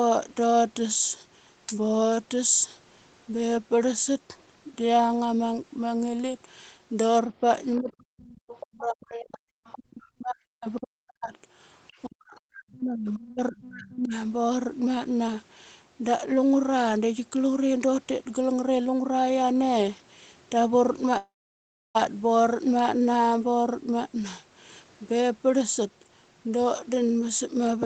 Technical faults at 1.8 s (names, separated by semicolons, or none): none